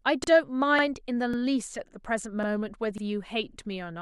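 Speech with overlapping chunks: at 0.24, 0.79, 1.34, 1.88, 2.43, 2.98 and 3.53 s, about 48 ms of audio plays a second time. Each 0.5 s chunk starts before the previous one finished, so the joins fall roughly every 0.55 s and give a regular stutter or click. On a waveform, each join shows a short repeated stretch with a discontinuity. On a spectrogram, thin vertical seams appear at those times, with formant patterns briefly duplicated.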